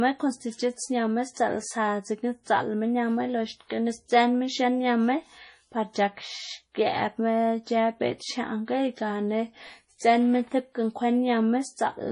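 MP3 compression damage runs throughout this speech clip, from start to finish, and it is heavy. Nothing is left above 10.5 kHz, a hard ceiling where the encoder has simply dropped the treble, and the remaining sound has a watery, swirling texture as quiet frequency components flicker in and out between frames. S sounds turn metallic and onsets smear. The likely cause is MP3 encoding at a very low rate, which fits a bitrate around 32 kbps.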